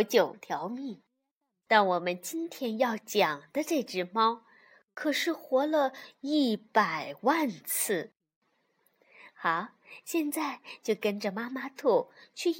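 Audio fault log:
No audible faults found anywhere in the speech.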